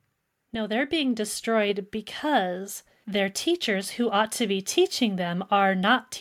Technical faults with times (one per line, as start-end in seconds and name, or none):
0.38-5.45 automatic gain rising